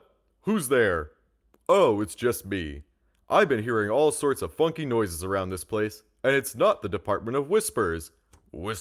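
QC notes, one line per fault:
No faults heard anywhere in this speech recording.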